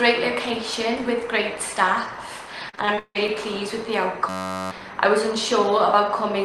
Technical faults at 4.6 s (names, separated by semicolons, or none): system hang loop